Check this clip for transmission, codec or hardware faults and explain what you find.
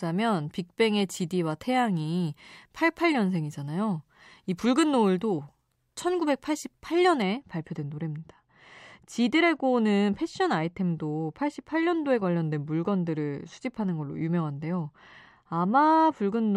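One fault is present. From 7.22 s to the end, de-emphasis is applied wrongly: a treble cut on speech without pre-emphasis drops 10 kHz about 13 dB, leaving it dull and muffled.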